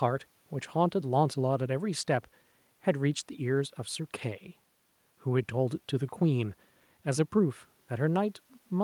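No technical faults can be heard anywhere in the speech.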